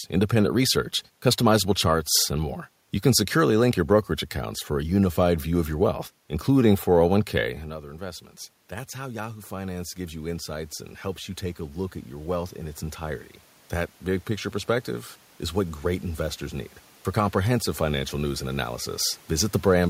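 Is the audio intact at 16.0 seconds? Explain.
No. At 16.0 s, automatic gain rising is under way (7.67–18.73 s): after the talker moved back, the control lifts voice and room noise together by about 14 dB, an envelope swelling gradually on the waveform.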